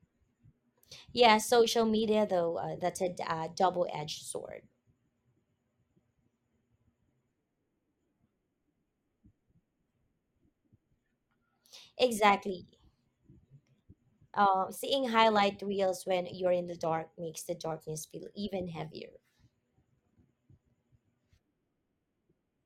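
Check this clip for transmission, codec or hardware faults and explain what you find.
Nothing in this speech recording points to a transmission, codec or hardware fault, so there's nothing to flag here.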